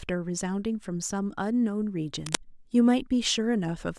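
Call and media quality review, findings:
Cable scratch noise, 2.26–2.41 s: dense, uneven scratchy burst over the speech, nearly as loud as it. Likely a worn cable or connector moved, with contact resistance fluctuating.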